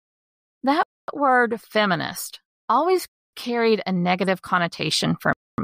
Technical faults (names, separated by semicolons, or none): gap between chunks